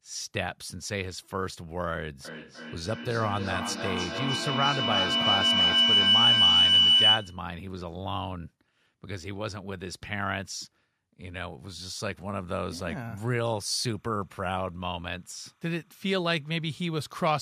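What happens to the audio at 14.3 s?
At 14.3 s the speech carries timecode bleed, which runs from 13.47 s to the end of the clip at 17.41 s. Linear timecode from an adjacent track or cable is leaking in. Its square-wave code flips between two pitches an octave apart, around 1 kHz and 2 kHz, at a rate that fits 30-frame code, producing a chirping warble roughly 40 dB under the speech. That rapid octave alternation is what separates it from a steady single-pitch whine or hum.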